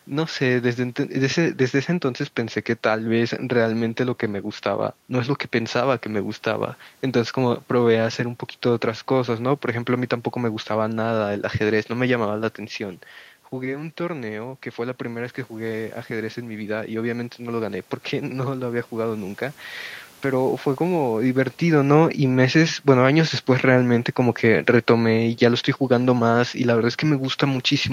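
Speech with room noise, where from 21.62 to 26.39 s automatic gain falling lowers everything by about 4 dB. The room noise sinks with the voice, unlike the talker shift around 21 s.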